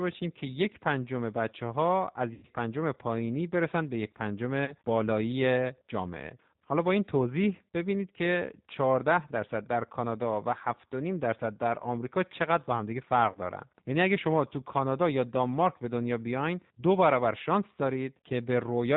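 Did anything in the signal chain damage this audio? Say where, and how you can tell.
Yes, at two stages. At the codec, the whole clip has been through G.729, with plainly audible damage. The speech is band-limited with nothing above 4 kHz, and it has the slightly rough, synthetic edge of a coder that rebuilds each 10 ms frame from a vocal-tract filter, a pitch predictor and a few pulses. The sound fits the 8 kbit/s G.729A variant.

On the network, there is VoIP packet loss concealed by the speech codec in three places: 2.34–2.45 s, 4.65–4.75 s and 13.32–13.38 s. In each gap the decoder kept extrapolating its last pitch and filter at falling gain, so the speech smears into a buzzy tone or coloured noise that fades instead of cutting out. The first gap covers about 90 ms, which fits three lost packets. The other two each cover about 30 ms, which fits a single lost packet. Because each frame builds on the one before, the speech stays weak or distorted for tens of milliseconds or more after each gap ends.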